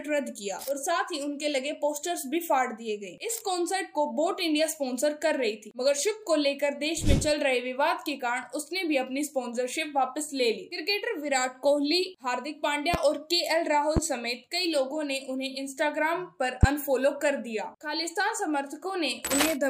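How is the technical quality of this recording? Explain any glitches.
The recording is marred by three loud pops late in the clip. Each loud pop strikes at 12.94 s, 13.97 s and 16.63 s and lasts about 30 ms. The first stands about 15 dB above the surrounding audio, and the later two about 20 dB. The likely cause is a sudden voltage pulse, from a plug, switch, static discharge or driver glitch, entering the signal path. Each is heard as a single sharp thump laid over the sound, which continues beneath it.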